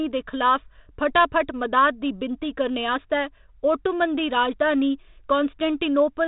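No technical faults are present.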